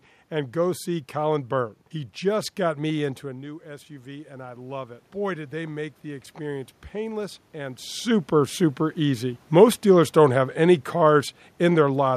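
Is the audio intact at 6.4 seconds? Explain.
No, at 6.4 s you're inside an automatic gain rise from 3.22 to 8.09 s: after the input dropped about 13 dB, the gain creeps up about 9 dB, swelling voice and room noise together.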